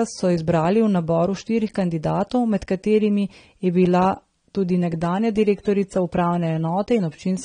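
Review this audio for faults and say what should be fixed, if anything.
The speech is dull and smeared throughout, with nothing above about 9.7 kHz and a warbly texture, likely AAC compression at a low bitrate around 32 kbps. To prevent it, export with a higher AAC bitrate or keep a lossless master.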